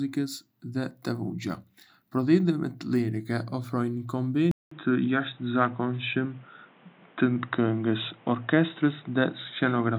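Speech, with a clear break at 4.51 s. There the sound drops out for 200 ms. It returns dull and boxy, with nothing above 3.8 kHz. The level changes by about 5 dB, and a new background noise sits about 30 dB under the speech. This lasts to the end. The narrow band, new tone and fresh noise floor point to an input switched to a poorer device, likely a headset's call profile or a lesser microphone.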